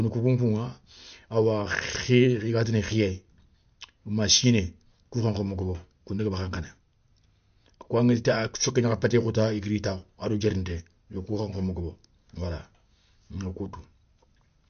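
MP3 compression artefacts run through the whole speech recording, likely from a low-bitrate encode that fits roughly 48 kbps. Nothing survives above 6.5 kHz, so sibilants lose their edge, and the encoder, starved of bits, drops weak frequency components frame by frame, leaving a plainly audible watery, swirling texture.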